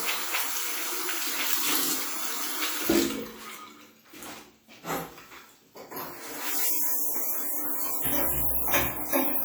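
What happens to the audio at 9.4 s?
At 9.4 s the audio carries the same ringing, washy smear heard throughout, with hiss breathing alongside the signal, likely from WMA compression at a rate fitting about 48 kbps. Long transform blocks spread quantisation noise over tens of milliseconds, yet content still reaches 20.1 kHz, so this is not simple band-limiting.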